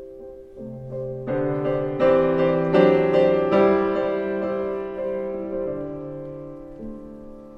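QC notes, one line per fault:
Nothing stood out on listening.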